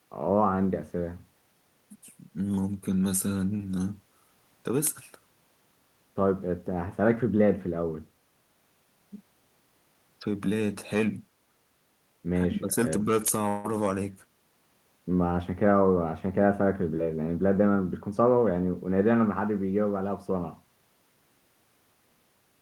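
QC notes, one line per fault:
3.57–3.60 s, short concealed packet loss: about 20 ms of the speech never arrived in time, and the receiver bridged the hole by extending the preceding sound for roughly 9 ms before crossfading back into real audio. The result is a tiny smear or wobble. On a spectrogram the sound runs on unnaturally smooth for a sliver, with a faint seam where the real signal resumes.
13.48–13.66 s, long network dropout: for about 0.16 s the speech turns into a continuation of the last sound, a buzzy or hissy tail that carries on for nearly the whole gap with no fall to silence, then the speech picks up further along with that stretch gone. This is likely a run of lost packets filled by concealment. A spectrogram shows smeared, repeated harmonics or flat noise fading.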